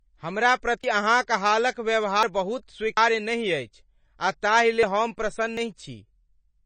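From the first moment the speech carries MP3 compression artefacts: the sound has a watery, swirling quality as weak frequency components flicker on and off between frames, with s sounds turning metallic. The damage is plainly audible and fits a low bitrate near 32 kbps, likely from a starved encoder. That swirl marks it as codec damage rather than a simple low-pass filter.

At 0.84 s, just before "अहाँक हालक", the first dropped buffer (overrun) occurs. Its likely cause is that the program failed to collect samples before the hardware overwrote them. About a tenth of a second vanishes, and the audio on either side is butted together, producing a sudden jump forward. The same thing happens at 2.23 s, right after "अहाँक हालक", and again at 2.97 s and 4.83 s, the last just after "नहि अछि आ ताहि". At 5.57 s a longer piece, roughly a fifth of a second, disappears. Unlike a dropout that leaves a gap of silence, these leave no pause at all, only a skip.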